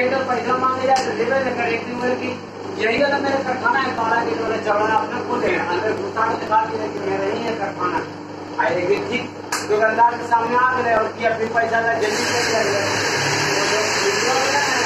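From 0.49 s to 14.45 s there's a steady tick every half second or so, around thirty in all: periodic USB or driver dropouts. Something keeps stalling the audio path, and each time roughly a millisecond of sound is skipped outright, leaving a small click.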